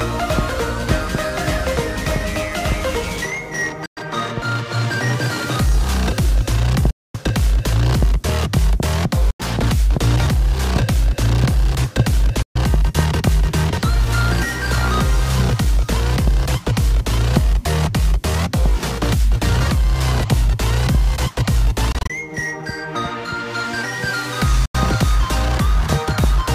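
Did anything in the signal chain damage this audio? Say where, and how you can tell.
Yes: a Bluetooth dropout at 3.86–3.97, 6.90–7.15, 9.30–9.40, 12.42–12.56, 21.92–22.10 and 24.65–24.75 s. In the wireless playback link, packets likely arrived too late and were discarded, so the output fell silent, then resumed further on as though it had kept playing. Gaps run from 85 to 235 ms in steps that fit packets of about 21 ms each. At 21.92 s the loss is scattered: holes of at most 21 ms spread across 171 ms.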